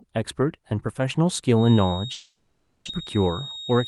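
A feedback whistle enters at 1.51 s and continues to the end: a thin, steady tone at 3.7 kHz sitting roughly 15 dB below the speech and swelling and fading slowly in level. The likely cause is a loudspeaker-to-microphone loop running at the edge of oscillation. One frequency near 3.7 kHz gets just enough gain around the loop to keep ringing, but not enough to build into a runaway howl.

A long network dropout runs from 2.13 s to 2.89 s, under the whistle. For 740 ms the receiver had no fresh audio and bridged the gap by stretching the last sound into a fading buzz, with about 30 ms of true silence. About 600 ms of speech never arrives. When sound returns, it resumes further on, and the timing has shifted by around a tenth of a second, likely from the link stalling and the receive buffer resettling.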